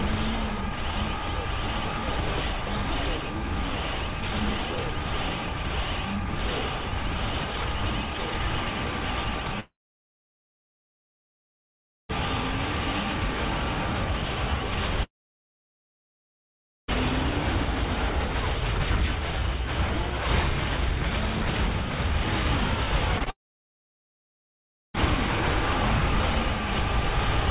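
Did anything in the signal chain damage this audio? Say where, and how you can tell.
Yes, the network stage caused the damage. There are three long network dropouts, at 9.6 to 12.11 s, 15.03 to 16.9 s and 23.3 to 24.96 s. In each, the last sound is drawn out into a brief fading buzz, then almost pure silence for most of the stretch. The sound then resumes partway on, with no catch-up. That points to a likely burst of lost packets that the receiver's concealment could only bridge for its first moment. A local mute or recording stop would cut off cleanly rather than smear the tail.

There are also scattered short gaps between 23.19 and 24.98 s, about four of them, each no longer than about 20 ms and adding up to roughly 40 ms. They show up as small ticks and smeared hiccups around the third dropout. These are isolated packets lost one at a time and patched by repeating the last sound. That separates them from the dropouts, and the way they are scattered rather than repeating evenly separates them from buffer underruns. 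The narrow 4 kHz bandwidth throughout comes from the G.711 mu-law call codec.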